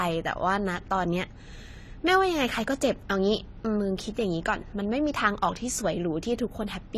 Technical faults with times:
0.00-6.97 AAC compression

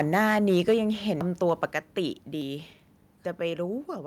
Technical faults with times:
0.00-0.74 microphone overload
0.72 microphone volume stepped down
1.21 dropped buffer (overrun)
1.49-1.65 microphone overload
1.71 microphone volume stepped down
3.78 microphone volume stepped down

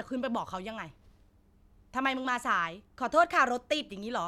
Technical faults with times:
none

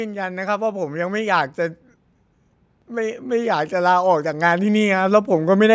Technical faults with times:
0.14-1.86 automatic gain rising
2.73-5.70 automatic gain rising

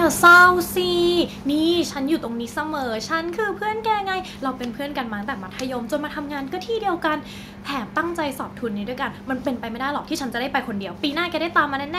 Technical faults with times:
0.24-0.46 microphone overload
0.27 microphone volume stepped down
1.26 microphone volume stepped down
2.28 microphone volume stepped down

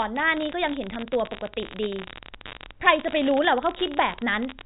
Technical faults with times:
0.00-4.66 unreliable data bit

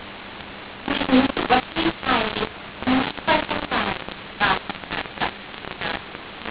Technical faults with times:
0.00-6.50 mu-law and A-law mixed up

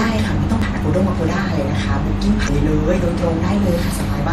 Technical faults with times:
0.00-4.33 MP3 compression
0.59-0.63 damaged data in a compressed stream
2.44-2.49 damaged data in a compressed stream

